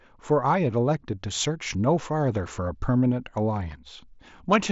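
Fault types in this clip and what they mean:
No faults can be heard in this speech clip. It carries the band-limited sound of a Bluetooth mSBC headset link, with nothing above about 7.7 kHz and a light grain from the codec.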